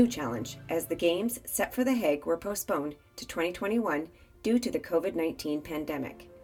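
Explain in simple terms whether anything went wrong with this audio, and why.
At 2.47–2.51 s, short concealed packet loss: 20 ms of audio arrived too late, so the receiver stretched the preceding sound across the gap, leaving a brief smear.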